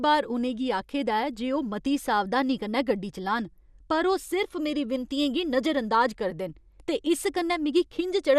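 Speech, with MP2 compression damage plainly audible throughout. Nothing is present above 14.4 kHz, so the top sounds dull. Upper sub-bands flicker on and off, giving a gurgling, granular texture. The likely cause is a low bitrate, around 80 kbps.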